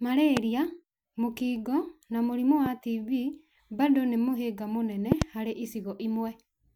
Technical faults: loud pop

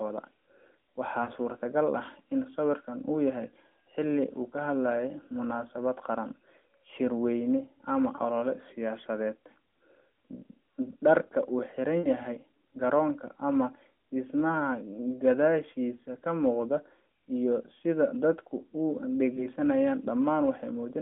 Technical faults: lost AMR speech frames

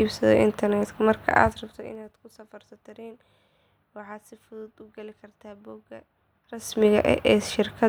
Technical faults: zipper noise

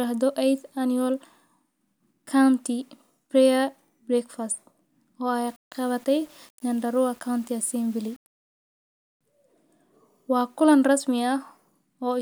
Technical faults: low bit depth without dither

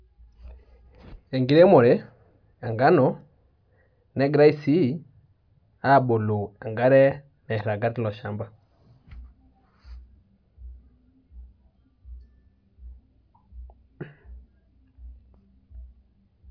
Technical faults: none

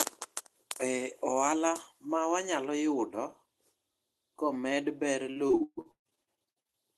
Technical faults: repeated packet loss (robotic sound)

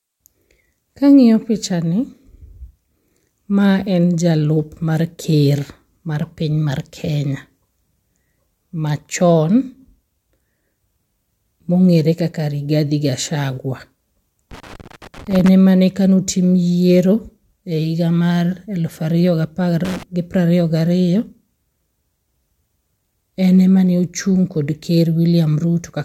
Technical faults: loose connector crackle

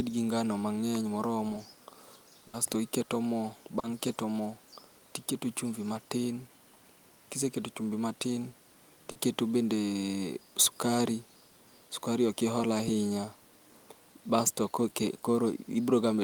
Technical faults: burst of packet loss; short concealed packet loss

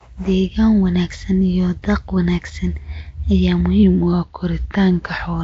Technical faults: Nellymoser compression; drift correction step

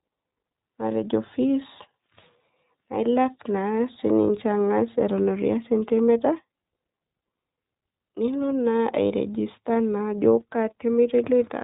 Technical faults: iLBC codec

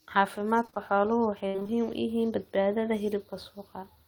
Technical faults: repeated packet loss (robotic sound)

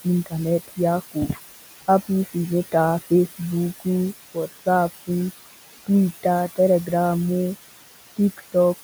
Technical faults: noise suppressor artifacts

